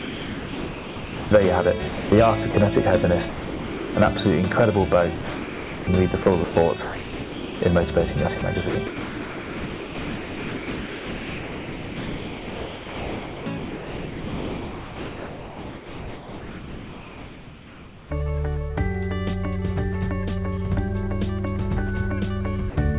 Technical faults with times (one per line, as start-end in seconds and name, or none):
0.00-1.31 sound dropped by the voice detector
1.88-2.54 sound chopped by the voice detector
3.29-3.95 sound dropped by the voice detector
5.15-7.61 sound chopped by the voice detector
8.39-18.11 sound chopped by the voice detector
22.70-22.76 sound dropped by the voice detector